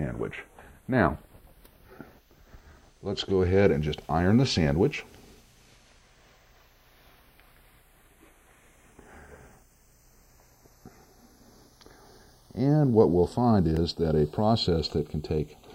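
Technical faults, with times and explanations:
Throughout: channels drifting apart. The two channels run on clocks that disagree by a few tens of parts per million. The delay between them creeps up to roughly a third of a millisecond. Summed to mono, comb notches sweep slowly, heard as slow flanging.
13.77 s: block of digital silence. A block of under a millisecond, about 0.85 ms, drops to silence. The sound stops and restarts without any fade. With edges that abrupt, this very short hole comes across as a brief tick.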